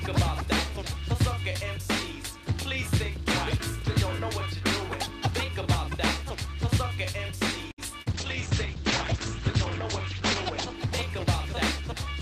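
At 7.71 s the sound hangs for about 65 ms, held a little too long with a faint buzz, then resumes where it left off. This is a short stall from a late packet: the jitter buffer emptied while waiting, and the receiver stretched the last sound until the packet arrived. Nothing was lost, but the stream now runs 65 ms later.

At 8.02 s, for about 60 ms through 8.08 s, there is a brief smear with a slight wobble. This is short concealed packet loss: about 40 ms of audio never reached the decoder in time, so the receiver extended the preceding sound to cover the gap and then blended back into the real signal.

From 8.12 s to the end the audio turns muffled and rough. This is a call bitrate drop: the encoder was cut from 48 to 11 kbps, coding more coarsely and lowering its bandwidth from 20 kHz to 8 kHz. It stays at that floor for about 2.4 s.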